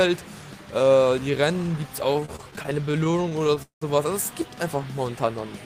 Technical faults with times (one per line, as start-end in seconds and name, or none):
2.13-3.83 repeated stalls (stutter)